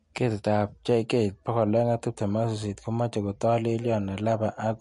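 From start to finish the speech has no content above about 11.3 kHz, and the damage is plainly audible: sibilants come out thin and swirly, with a watery shimmer around the higher parts of the sound and softened onsets. This points to MP3 compression, likely at a low bitrate on the order of 48 kbps, where the encoder drops the treble at a fixed cutoff and lets weak frequency lines flicker on and off between frames.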